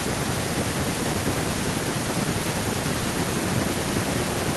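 Speech with no technical faults; it was carried over a WebRTC call path whose Opus-style coding leaves the top end stopping at about 12 kHz, as expected for that link.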